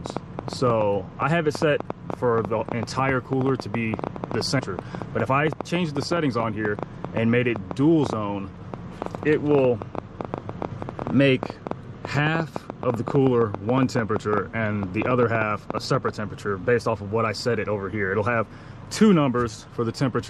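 A train of clicks runs from 0.06 s to 16.1 s: roughly 150 sharp pulses of similar shape, at about 7.8 per second but unevenly spaced, standing well above the sound and audible in quiet moments too. The irregular pace and the persistence through pauses point to interference or a faulty connection, likely, rather than clipping or a single dropout. At 4.59 to 4.61 s the audio makes a skip ahead: around 400 ms is dropped and the two sides are joined with no silence, so it is a jump rather than a gap or a stutter. Right after, from 4.77 s to 6.76 s, a jitter buffer speed-up plays the audio at 109% with unchanged pitch, trimming about 200 ms in small pieces. It sounds hurried rather than cut, and the pitch stays put, unlike a tape-style speed change.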